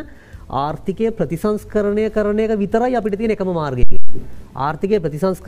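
A phantom power thump arrives at 3.83 s and dies away by 4.24 s. A supply voltage was switched on a live input, and that sudden DC step passed through the coupling capacitors as a single low-frequency surge. It sounds like a deep, dull thud. The bulk of the energy falls away within roughly 93 ms, leaving a short, fading low rumble.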